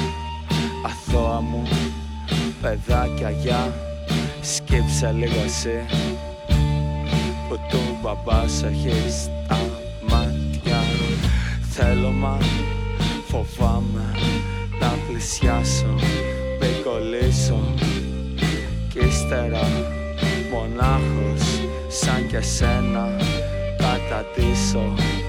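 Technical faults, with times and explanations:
No technical faults are audible.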